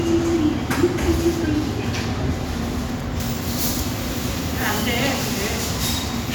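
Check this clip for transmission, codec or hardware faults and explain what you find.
One fault: pre-emphasis left on, from 3.2 s to the end of the clip. From that point the treble jumps, about 13 dB hotter at 10 kHz than at 1 kHz, following the FM 75 µs curve. The boost meant to be undone by a matching de-emphasis stage never got its cut, so everything above roughly 2 kHz stays lifted. The sound turns thin, glassy and hissy. Unlike a low-cut fault, the bass is still present; only the top is exaggerated.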